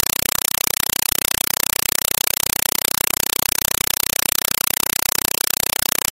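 From start to finish, loud, harsh chattering static replaces the speech, pulsing about 31 times a second with a roughly 4 ms burst of noise each time and silence between. It is a compressed stream played as audio: an AC-3 (Dolby Digital) bitstream reached the output as if it were ordinary samples and was never decoded. Each coded frame comes out as a short noise burst followed by zero padding.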